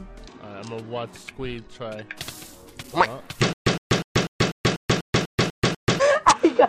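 From 3.53 to 5.99 s, stutter with silent gaps: identical 112 ms blocks recur every 246 ms, separated by flat-line silence, likely a stalled stream.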